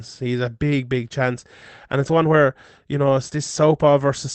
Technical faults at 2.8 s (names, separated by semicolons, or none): none